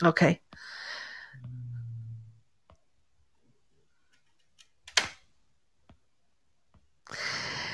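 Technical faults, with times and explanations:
No technical faults turn up anywhere in the clip, so there are no times or explanations to give.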